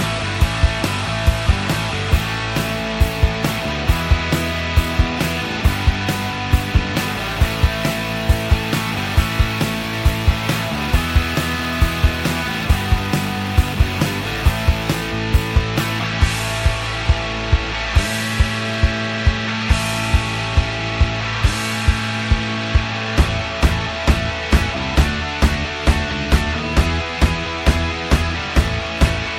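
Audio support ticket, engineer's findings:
Sample clock jitter, 7.07 to 15.07 s: hiss and roughness riding on the sound, loudest on loud, bright passages, gone in gaps. Converter clock unstable, timing error around 10 microseconds, error roughly 25 dB under signal. Spectrogram: broadband haze tracking level, clear in silences.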